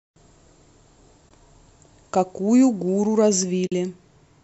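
At 1.29 to 1.31 s and again at 3.67 to 3.72 s, the speech drops into brief soft holes, roughly 20 and 50 ms long. That's AAC frame loss with muting: missing frames decoded as silence, faded by overlapping windows. The 10 ms granularity likely points to low-delay AAC.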